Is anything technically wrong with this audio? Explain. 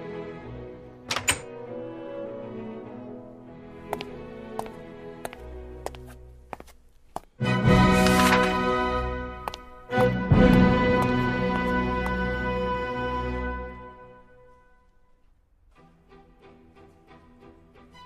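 No, nothing technically wrong can be heard here.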